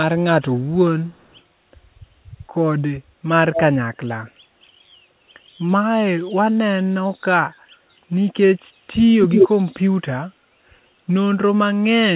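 Faint delayed copies of the speech trail it at 0.60–0.68 s, 1.05–1.40 s and 4.26–4.31 s, a much stronger one at 3.54–3.62 s, and at 9.22–9.49 s one louder than the speech itself, all lagging about 177 ms. This is echo leak, likely from a far-end loudspeaker whose echo canceller let its microphone pickup through, in band-limited audio with nothing above 4 kHz.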